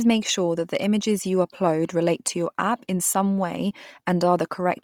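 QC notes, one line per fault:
Throughout: Bluetooth LC3 compression, likely. The speech has a heavy breathy, grainy edge where upper-spectrum detail is discarded and replaced with noise fill, consistent with 10 ms transform frames at a low rate around 32 kbps. Content stops near 20.3 kHz.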